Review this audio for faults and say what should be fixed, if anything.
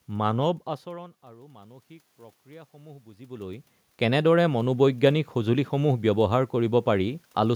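Automatic gain rising runs from 0.84 s to 4.84 s. The input level falls by about 22 dB, partly because the talker moves away from the microphone around half a second in. The gain control responds by raising its gain by about 7 dB over four seconds. Because the gain is applied to the whole signal, the room noise swells along with the voice, and the background audibly lifts as the speech level recovers. A second change in distance near 3 s is heard as a shift in level as the gain is still climbing. To prevent it, slow or cap the gain control's upward adjustment, or disable it and set a fixed input gain suited to the talker's normal distance.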